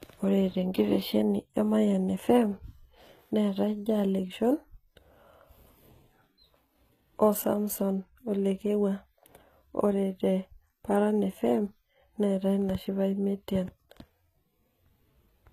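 Throughout the speech, the treble sounds bright but synthetic: s sounds come out gritty and lispy, and nothing lies above 14.9 kHz. Likely HE-AAC compression at a rate near 20 kbps, rebuilding upper bands from copied lower ones. Unlike plain low-pass dulling, the top stays present but metallic.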